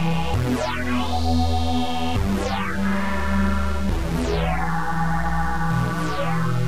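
Nothing goes wrong anywhere in this audio, so there's no fault to point to at any moment.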